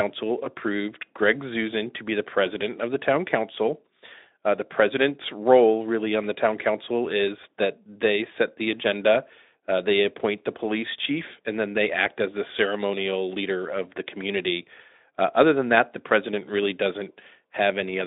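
No technical faults are audible.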